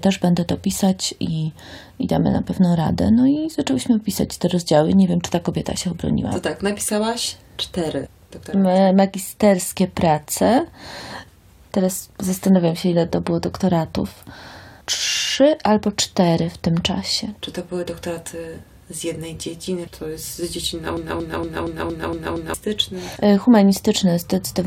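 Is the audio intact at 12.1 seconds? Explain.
Yes, at 12.1 seconds the audio runs continuously with no dropout, glitch or other fault audible at that point.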